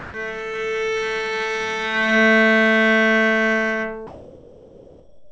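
Everyday sounds where the background is swapped for comfort noise at 0 to 0.14 s and from 4.07 s to the end, likely from discontinuous transmission. The first patch is about 15 dB louder than the real background, the second about the same level. A spectrogram shows a smooth, textureless wash, topped at 8 kHz by the G.722-type call path, and the waveform a flat, even band.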